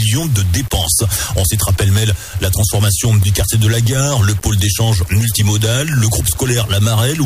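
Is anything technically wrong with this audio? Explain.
Yes, there is one problem. Throughout, low bit depth without dither makes the audio grainy, with distortion that tracks the signal, sitting around 25 dB below it. It likely comes from rounding to about 5 bits. On a waveform this shows as visible stair-steps, and a spectrogram shows a signal-dependent noise haze.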